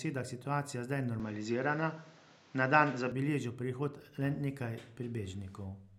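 At 1.20 s the speech suddenly turns duller. Nothing above about 7.6 kHz gets through, so the top end and air vanish. There is no gap at the change, and the loudness stays about the same. A faint new background noise appears, well below the speech. At 3.12 s the full bandwidth returns just as abruptly. This pattern points to the input switched to a poorer device, likely a different microphone or headset profile, and then switching back.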